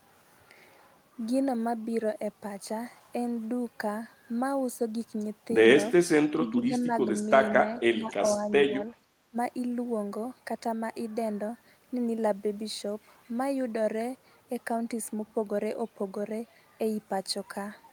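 From 6.35 to 6.94 s and again from 7.62 to 8.5 s the speech sinks by roughly 10 dB. That's speech suppressed in double talk, likely from an echo canceller that couldn't tell the talker from loudspeaker echo while both sides spoke, so it ducked everything. Inside that second dip, at 7.75 to 7.8 s, there's a faint scrap of the voice repeated about 446 ms late and roughly 35 dB down. That's an echo leak, likely where one side's canceller let some of its loudspeaker pickup slip back through. The ducking returns briefly at 8.66 to 8.85 s, then bites hardest at 9.3 to 9.36 s, a short gap about 20 dB down.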